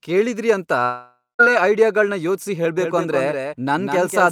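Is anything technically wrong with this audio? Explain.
Yes, there are two faults in this speech.

Long network dropout, 0.83 to 1.41 s, after "ಕೇಳಿದ್ರಿ ಅಂತ": audio likely stopped arriving, so the last sound smears into a fading buzz, then silence, and speech resumes at "ಐಡಿಯಾಗಳ್ನ ಯೋಚ್ಸಿ" with about 560 ms missing.

Doubled audio track, 2.80 s to the end, after "ಐಡಿಯಾಗಳ್ನ ಯೋಚ್ಸಿ": a second copy, likely from a slower capture path, follows roughly a fifth of a second behind and about 5 dB quieter, starting abruptly with no room colour.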